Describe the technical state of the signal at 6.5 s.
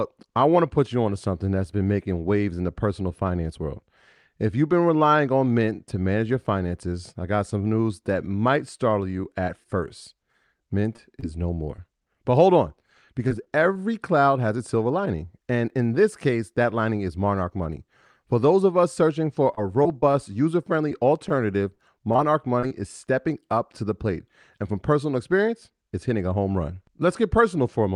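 At 6.5 s the speech comes through intact, with no dropout, glitch or other fault at that moment.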